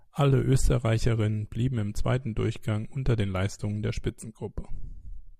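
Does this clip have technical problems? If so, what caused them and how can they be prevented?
No, this clip has no technical problems, so there is nothing to trace back or prevent.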